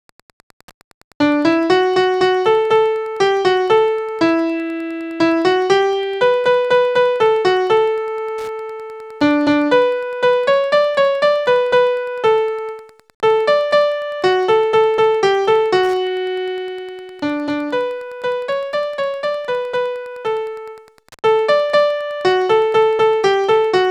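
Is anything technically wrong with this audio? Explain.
Yes. Wi-Fi interference runs throughout the clip. A Wi-Fi radio sitting close to the audio circuitry sends a beacon every 102.4 ms, and the circuit rectifies those radio bursts into the audio band. The result is a steady ticking close to ten times per second. It sits roughly 35 dB below the main sound.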